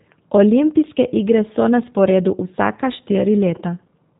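From start to finish the speech runs through a G.729 codec, clearly audible: nothing above 3.8 kHz, and that rough, synthetic buzz fits roughly 8 kbit/s.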